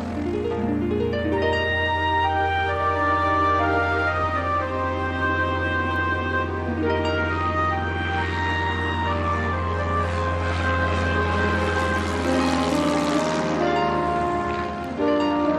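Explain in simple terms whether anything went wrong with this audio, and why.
Two sharp ticks, at 5.96 s and 14.84 s, are bit error spikes. In each, a single stored number in the digital audio was corrupted, so one sample jumped to a wrong value and straight back. Unlike a vinyl crackle or a dropout, nothing goes missing and there is no texture of repeated clicks. Each is one isolated, instant tick with no connection to the surrounding sound. The second one is a little louder.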